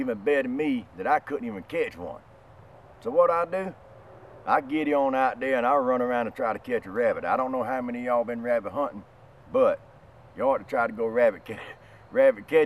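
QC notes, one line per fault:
6.56–12.65 s, resampler restarted on every block: from 6.56 s to the end, a steady 50 Hz buzz rides on the sound and is present only while signal is present. The converter, consistent with a 44.1 kHz to 48 kHz change, processed each 20 ms block in isolation, so at every block edge it had no true neighbouring samples to interpolate from. Each boundary carries a small error, and fifty of these per second fuse into a buzz at the block rate.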